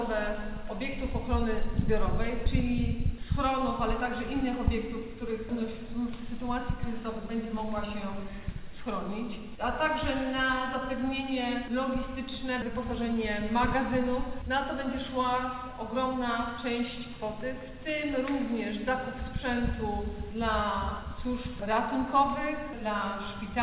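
Nothing's wrong with this audio; it just has the narrow, phone-like sound of a call path using G.711 mu-law at 64 kbps, with nothing above 4 kHz, which is simply how that path sounds.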